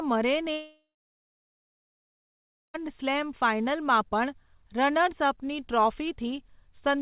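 Speech over a narrowband call line, with nothing above 4 kHz, which fits G.711 mu-law at 64 kbps. From 0.54 s to about 2.76 s the sound drops out for roughly 2.2 s. It starts with a short concealment buzz smeared from the last sound, fading away, then goes dead silent for about 1.9 s. The speech resumes at "સ્લેમ ફાઇનલમાં" with that stretch simply gone. It's most likely a long network dropout, where packets stopped arriving and the receiver could only patch the gap briefly before giving up.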